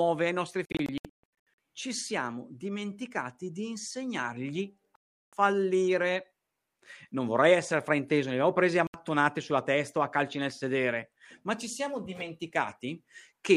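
Bluetooth dropouts at 0.65–1.58 s (scattered gaps, longest 139 ms), 4.96–5.33 s and 8.87–8.94 s: speech cuts to silence and resumes further on, likely from late, dropped wireless packets.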